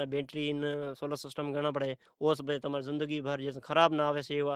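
Throughout the speech, Opus voice compression is plainly audible: hoarse, slightly robotic tone from coarsely coded excitation, fitting roughly 16 kbps hybrid mode, with blocky, smeared energy above 8 kHz on a spectrogram.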